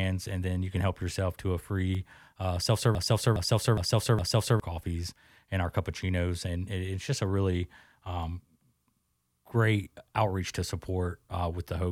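From 2.95 to 4.60 s, right after "to a free uh", a fragment of about 0.41 s repeats exactly four times back to back before "coffees and our cappuccinos" resumes. This broken-record loop likely came from a stalled player or stream resending its last fragment, losing the intervening audio.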